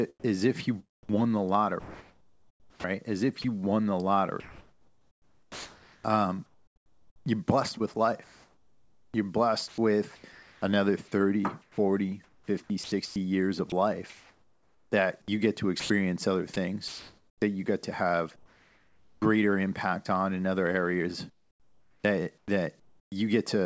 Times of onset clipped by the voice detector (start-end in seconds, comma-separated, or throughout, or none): 19.06-19.22